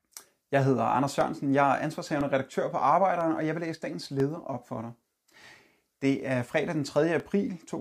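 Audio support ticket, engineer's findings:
Periodic USB or driver dropouts. Short ticks in the speech, evenly spaced once per second, from 0.20 s to 7.20 s. Each gap is about a millisecond of audio replaced by silence. Ticks are audible only over signal. Probable component: USB bus or audio driver, blocked at a fixed interval by a background task. Each stall drops a sliver of samples, leaving a tiny hole that clicks.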